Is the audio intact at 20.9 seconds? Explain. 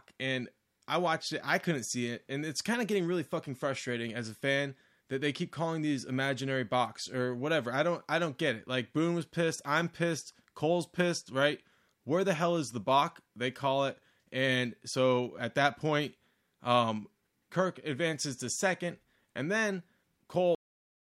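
No, 20.9 seconds falls inside a cut-off end. The speech stops abruptly at about 20.55 s and there's nothing but digital silence from there to the end, roughly half a second later. What you're hearing is the final stretch of audio never getting written out or played, so the sound is chopped off mid-utterance with no natural decay. It just drops straight to nothing rather than fading.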